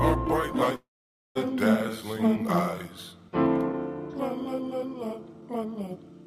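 At 0.75 s the sound turns into a smeared buzz that fades away, and by 1.37 s there is about half a second of silence. The sound then resumes further on, with roughly 0.4 s never played. This is likely a long network dropout: no packets arrived, so the receiver stretched the last audio and then gave up. A short packet loss would leave a brief glitch. Here the fill dies out into silence, and the timeline jumps forward, adding around a fifth of a second of delay.

From 4.42 s to 6.10 s the sound runs about 10% fast, yet its pitch stays put. That is a jitter buffer speed-up. The receiver was holding more audio than it wanted, so it snipped out many tiny pitch-period-sized pieces in a row, roughly a fifth of a second in total. A resampling or clock-rate error would raise the pitch along with the tempo. Here only the pace changes, giving a hurried rhythm.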